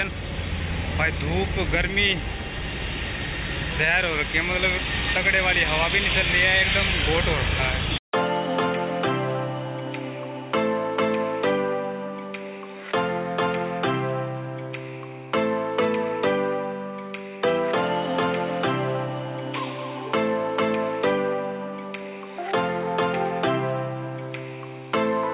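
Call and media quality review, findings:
No faults found.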